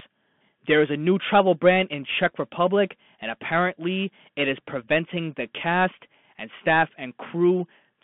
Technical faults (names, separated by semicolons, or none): Bluetooth CVSD headset codec